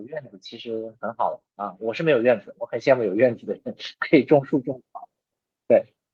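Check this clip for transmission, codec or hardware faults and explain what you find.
One fault is present: automatic gain rising. From 1.81 s to 3.47 s, the level climbs steadily by about 6 dB. The automatic gain control judged the input too quiet and raised its gain step by step over those 1.7 seconds. Because the gain acts on everything the microphone picks up, the speech and the background noise swell together. The result is a slow, even push forward, not a sudden jump.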